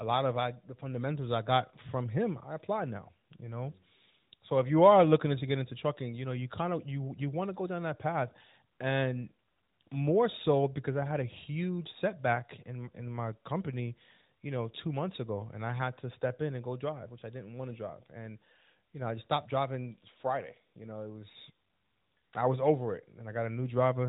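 Nothing goes wrong anywhere in this speech recording, so there's no technical fault to point to, just the narrowband sound of a mobile call with its top end stopping around 3.8 kHz.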